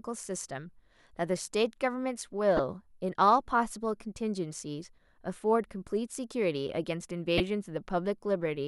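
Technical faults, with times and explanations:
2.57 to 2.60 s and 7.38 to 7.40 s, corrupt frame decoded: short blips of misplaced energy, peaking at about -15 dBFS and then about -10 dBFS. Damaged compressed frames, roughly two then one, were played anyway, so misread codes put sound at the wrong frequencies.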